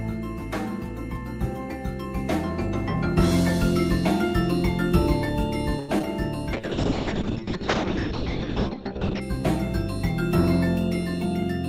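At 5.79 to 5.91 s there's a short stall from a late packet: the jitter buffer ran dry, so the receiver held the last sound for about 93 ms until the packet turned up. Nothing's lost, but that moment drags with a slight buzz or dip, and everything after sits 93 ms later.

Right after, two short concealed packet losses hit back to back, 5.99 to 6.02 s and 6.02 to 6.05 s. Each dropped 20 ms of audio, which the decoder papered over by extending the previous sound. You hear it as a quick smear or wobble.

Then at 6.53 s a call bitrate drop kicks in. The encoder gets squeezed from 48 to 6 kbps and stays at the bottom for about 2.65 s, with the bandwidth falling from 20 kHz to 8 kHz. It sounds muffled and watery until things recover at 9.27 s.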